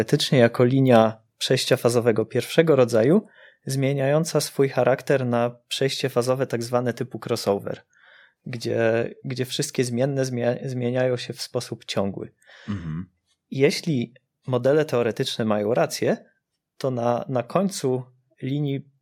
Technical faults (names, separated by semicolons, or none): microphone volume stepped down